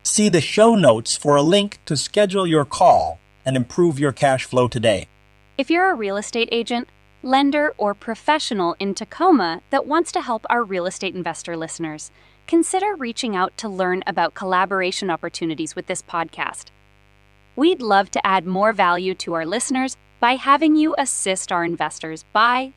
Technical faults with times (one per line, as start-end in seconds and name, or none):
0.00-22.76 mains buzz